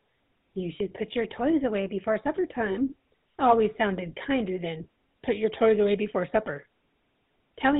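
From start to finish the speech carries the signature of the GSM full-rate codec, and the damage is plainly audible. The codec models the vocal tract as a filter and feeds it a coarse pulse excitation that keeps only one sample in three, so voiced sounds come out buzzy and gravelly rather than smooth. Nothing above 4 kHz survives, which dulls sibilants and removes air. The degree of roughness fits the 13 kbit/s rate.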